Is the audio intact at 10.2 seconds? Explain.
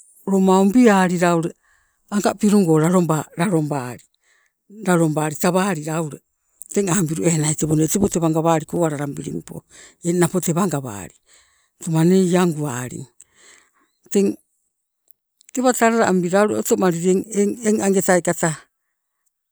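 Yes, at 10.2 seconds the speech plays through intact, with no audible fault at that moment.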